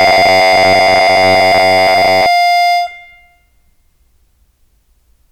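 A piece of music whose opening, from 0.01 to 2.26 s, collapses into a rigid, metallic buzz pitched at 93.8 Hz that only loosely tracks the music. This robotic sound from repeated short buffers most likely comes from fresh audio arriving too slowly. The playback covers the gaps by looping the last 10.7 ms or so, which fits that buzz frequency, and roughly two thirds or more of the real audio is skipped.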